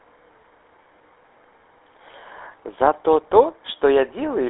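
Speech sounds buzzy and gravelly throughout, confined to about 300 Hz to 3.6 kHz: GSM full-rate codec damage, consistent with 13 kbps pulse-excited vocal-tract coding.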